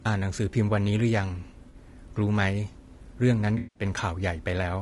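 Throughout, the speech sounds rough and grainy, with noise filling the gaps between harmonics and a thin, synthetic top band. This is likely low-delay AAC compression, such as AAC-ELD at a low bitrate near 32 kbps. A spectrogram would show blurred harmonic lines and a smeared upper band.

From 1.69 to 1.75 s, AAC frame loss with concealment leaves a brief smeared, noisy patch where the decoder repeats the last good spectrum. From 3.57 to 3.83 s, a longer concealed gap fades down and back in, showing as a waveform dip and a blurred spectrogram block.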